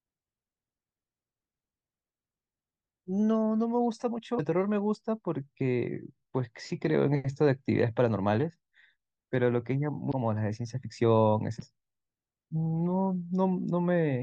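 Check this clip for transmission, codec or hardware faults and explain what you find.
Three brief bursts of damaged data in a compressed stream occur in the speech, at 4.36–4.40 s, 10.09–10.12 s and 11.58–11.62 s, each only 26 to 40 ms long. At each point corrupted bytes reach the decoder, which misreads the affected frames and loses sync until it finds a valid frame header again. Each event is heard as a short chirp, squawk, click or short hole.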